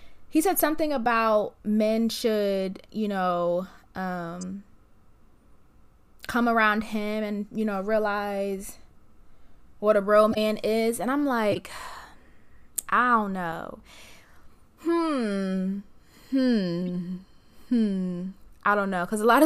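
A decoder played corrupt frames, putting energy at wrong frequencies for each damaged frame and producing brief chirps or noise bursts: 0.57–0.60 s (after "he said", before "something about men should"), 4.41–4.43 s, 10.31–10.38 s (after "what a bro"), 11.52–11.56 s and 16.87–16.89 s.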